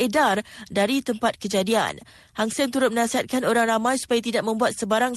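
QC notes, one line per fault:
No faults heard in this speech recording.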